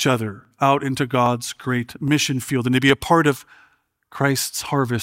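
A regular click recurs every 0.815 s from 0.45 s to 4.53 s. These are clock drift buffer slips, likely caused by two devices running on mismatched clocks, several hundred parts per million apart, so the buffer periodically drops or repeats a block of roughly fifteen samples.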